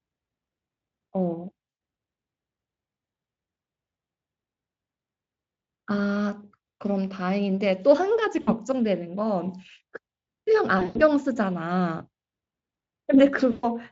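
Four dropouts show VoIP packet loss concealed by the speech codec: 100 ms at 1.69 s, 60 ms at 8.41 s, 140 ms scattered between 10.79 and 11.03 s, and 120 ms at 13.51 s. Each time, the decoder stretches the last bit of voice into a fading, buzzy or noisy smear, and the voice stays weak or distorted briefly afterwards.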